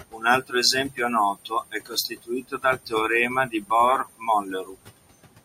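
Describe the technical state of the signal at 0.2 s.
Speech cut by the noise suppressor covers 0.2 s, within a dip from 0.11 to 0.24 s. The suppressor mistook this stretch of speech for background and pulled it down with the noise, by about 20 dB at its deepest, so the sound there comes across swallowed and faint.

Noise suppressor artifacts run through the whole clip, including this moment. The suppressor lowers the bands it judges to be steady noise by about 17 dB, frame by frame, so the room noise, which sits about 14 dB below the speech, drops away and returns around the speech.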